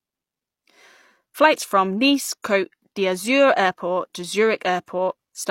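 A speech recording with pre-echo at 4.86 s. A short hiss of about 17 ms precedes a sharp attack, softening it, as block-based transform coding spreads quantisation noise backward.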